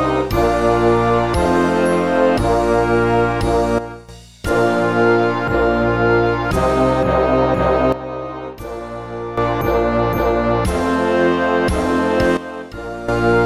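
A digital gain change applied without any ramp is the likely cause of the three sudden gain jumps here, where the level is switched from one sample to the next. The sound and its background noise drop together by about 12 dB at 3.79 s, 7.92 s and 12.37 s, then snap back up at 4.09 s, 9.38 s and 13.08 s. The edges are abrupt rather than faded.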